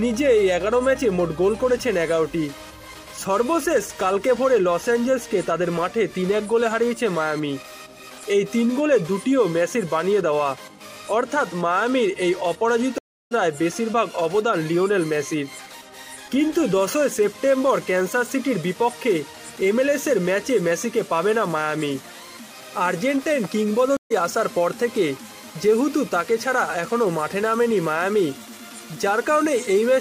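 Two stream reconnect dropouts hit this audio: flat-line silence from 12.98 to 13.33 s (327 ms) and 23.97 to 24.12 s (136 ms), each resuming roughly 0.4 s and 0.15 s further on, with a blank gap across all frequencies on the spectrogram.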